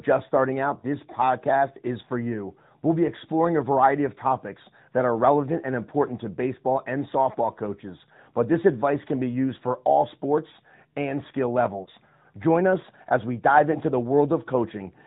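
From start to finish, the speech carries the sound of the AMR narrowband mobile codec. The signal is band-limited at 8 kHz sampling, so nothing above 4 kHz survives. The voice is rebuilt from a vocal tract model, a pitch predictor and a few pulses every 5 ms. The codec damage is plainly audible. The character points to a mid-rate mode, which fits 10.2 kbps.

Two lost AMR speech frames follow. The first comes at 11.84 to 11.89 s, right after "all sports and skill". The second comes at 13.72 to 13.78 s, after "us as we dive". Each gap fits a single lost 20 ms frame. A radio error failed the frame's checksum. The decoder then reused the last good pitch and vocal tract settings with falling gain. The result is a brief dip or warble, and the voice returns weak or rough for a moment.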